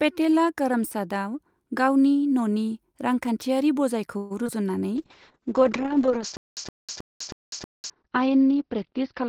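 From 4.17 to 4.32 s the sound stretches into a fading buzz for about 0.13 s, then resumes where it stopped. This is likely a call audio freeze: delayed packets emptied the jitter buffer, so a gap was inserted but nothing lost.

At 4.44 and 4.47 s, two short concealed packet losses occur back to back. About 20 ms each never reached the decoder, and the patched-over holes come through as a brief smear or wobble.

At 4.97 s a call bitrate drop begins. The encoder falls from 40 to 8 kbps and the bandwidth narrows from 20 kHz to 6 kHz, so the speech turns muffled and rough through to the end.

Between 6.37 and 7.90 s there is a stutter with silent gaps. A 0.12 s fragment repeats four times, each followed by 0.2 s of dead silence, every 0.32 s. The likely cause is a stalling stream replaying its last piece, and the audio due in that span is lost.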